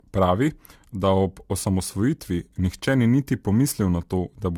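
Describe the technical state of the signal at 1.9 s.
At 1.9 s the signal carries two faults. The first is sample clock jitter, which runs from 1.39 s to 4.10 s. The converter's clock wanders, so each sample lands slightly early or late. The timing error is on the order of a few microseconds. Where the waveform changes fastest, that error turns into a wrong amplitude. The result is a fine hiss and roughness riding on the speech, about 30 dB below it. It grows with louder and brighter sounds and drops away in pauses.

The second fault is generation loss, present across the whole clip. The sound is swirly and hollow, with smeared onsets. That is more damage than a single lossy pass would leave. The likely cause is repeated decoding and re-encoding with AAC-LC, about three times. The character fits a bitrate near 64 kbit/s. Each pass quantises on a shifted frame grid, so the noise and spectral gaps build up rather than cancel.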